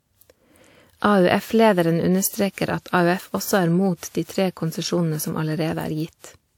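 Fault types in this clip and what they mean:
generation loss: The speech sounds swirly and hollow, consonant attacks smear, and nothing remains above 19.5 kHz, worse than its roughly 96 kbit/s quality suggests; likely from about four passes through an early WMA-type codec, each requantising on a shifted frame grid.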